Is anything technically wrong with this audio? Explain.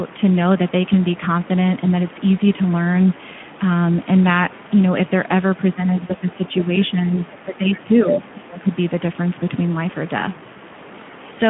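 Yes, two faults are audible.

Throughout the clip, the speech carries Speex codec damage. The band runs only from 150 Hz to 3.4 kHz, like a narrowband phone line. Within that band the coding artefacts are plainly audible: a hoarse, noisy roughness that fits a bitrate around 11 kbps. This low-rate CELP model has too few bits to describe the excitation faithfully. Unlike MP3-style warbling, the damage is a grainy texture on the voice itself rather than swirling high-frequency artefacts.

From 6.07 to 6.12 s, there is VoIP packet loss concealed by the speech codec. About 20 ms of audio went missing, which fits a single lost frame. The decoder filled it by extending its last pitch and filter settings at falling gain. The gap is heard as a brief fading smear rather than silence or a click, and the voice stays weak or distorted just after it. That lingering recovery sets it apart from a plain dropout.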